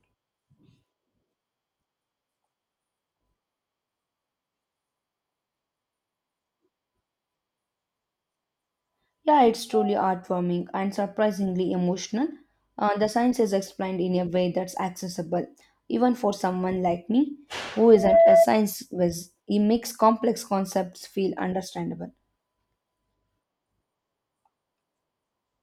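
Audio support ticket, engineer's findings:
Loudspeaker feedback squeal, 17.87–18.48 s. Single 670 Hz tone swells in over about a third of a second, peaking roughly 10 dB above the speech. Mic hearing its own speaker; loop gain tops unity at that frequency until broken.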